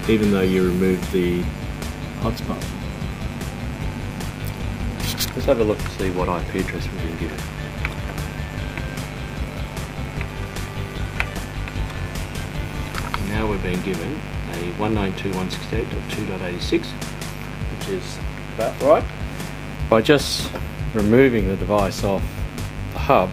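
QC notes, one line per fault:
Throughout, mains buzz: a steady, raspy buzz built on 50 Hz sits only about 10 dB below the sound, so it is prominent everywhere. Sharp switching spikes, such as from a dimmer, a rectifier or an unshielded cable, get into the signal twice per mains cycle and repeat at a 100 Hz rate. Those narrow pulses carry harmonics of 50 Hz well up into the kilohertz range, which gives the buzz its rasp rather than a smooth hum.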